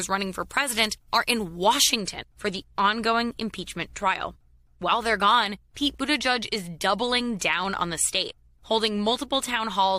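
From 0.0 to 2.0 s the speech has pre-emphasis left on: a treble boost was applied but the matching de-emphasis was never applied. Highs sit about 8 dB above 1 kHz at 10 kHz, which fits the CD 50/15 µs curve, so the speech sounds thin, bright and sibilant.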